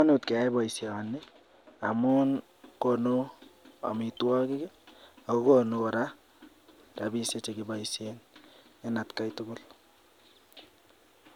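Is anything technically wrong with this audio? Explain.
Yes. From the start to about 2.1 s, de-emphasis has been applied wrongly: a treble-cut stage meant to undo pre-emphasis acted on speech that was never boosted to begin with, or the cut was applied a second time. With no boost for it to cancel, the roll-off simply removes top end, sloping smoothly downward so that 10 kHz sits about 10 dB below 1 kHz. That opening stretch of speech sounds dull and muffled, lacking crispness and air.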